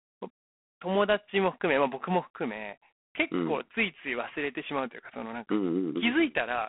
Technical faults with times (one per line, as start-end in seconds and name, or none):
0.00-6.69 G.726 ADPCM